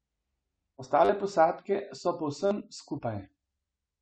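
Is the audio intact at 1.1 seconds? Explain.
No. From 1.05 to 1.09 s a repeated buffer occurs: a 10 ms block replays four extra times, losing about 40 ms of speech. This sounds like a brief 100 Hz buzz. The waveform shows identical repeating 10 ms cycles with hard joins, and the spectrogram shows 100 Hz-spaced harmonic stripes.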